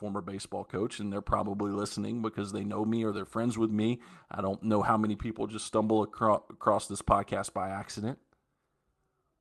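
No technical faults occur anywhere in the speech.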